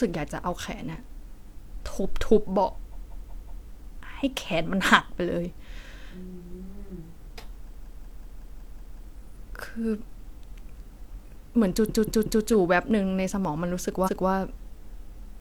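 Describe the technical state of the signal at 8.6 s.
Repeated frames run from 7.71 to 9.01 s, so 8.6 s falls inside a stutter. The same 185.8 ms block, which fits a short run of roughly four compressed frames, is decoded seven extra times, looping that fragment of speech and stretching the clip by 1.3 s.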